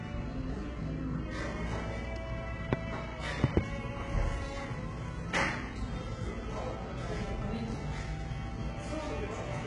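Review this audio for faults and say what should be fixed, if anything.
Throughout the recording, the treble sounds synthetic: upper detail is grainy and metallic, harmonics fail to line up where the coded band meets the rebuilt one, and nothing is present above 11 kHz. The likely cause is heavy HE-AAC compression at a very low bitrate, which fits around 12 kbps, with spectral band replication recreating the top from copied lower bands. Unlike a plain low-pass or ordinary AAC/MP3 dullness, the highs here are present but invented rather than missing. Prevent it by encoding from the original at a higher bitrate with plain AAC or another full-band codec, without band replication.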